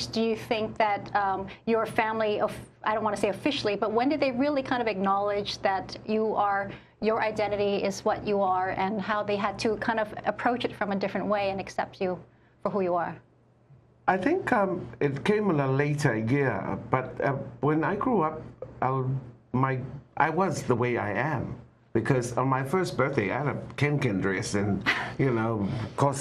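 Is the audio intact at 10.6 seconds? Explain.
No. At 10.6 seconds, as through the whole clip, the sound is dull and carries a gurgling, granular roughness, likely from MP2 compression at a rate that fits about 80 kbps. Layer II divides the spectrum into 32 equal sub-bands, and with so few bits the upper ones drop out and flicker back while the rest are coarsely quantised. That flickering separates it from a plain low-pass filter, whose top end stays steadily absent.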